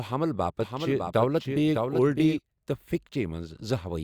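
From 0.61 s to 2.39 s the speech is heard twice: a second, full-band copy trails the original by roughly 0.7 s, a few decibels quieter, with no reverberant tail or room colouring, and it appears and vanishes abruptly at those edges. This is a doubled audio track, most likely caused by the same signal reaching the mix a second time through a slower path, so the two copies sit out of step.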